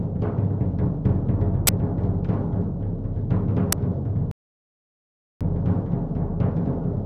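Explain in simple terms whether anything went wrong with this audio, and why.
Two things go wrong in this recording of everyday sounds.

At 1.67 s and again at 3.72 s there is an uninitialised buffer: a tiny, loud crack or burst of harsh digital noise. The player sent out a block of memory before any real audio had been written into it, so it played whatever junk was left there. The first burst lasts 16 ms, which fits a 512-sample buffer. The second lasts 4 ms, which fits a 128-sample one.

From 4.31 s to 5.41 s there is a rebuffering stall. The sound simply stops for about 1.1 s, because the player ran out of downloaded audio and had to wait for more. It then picks up exactly where it left off. This is what separates it from a dropout: nothing is skipped or missing afterward, and the pause only adds time to the clip.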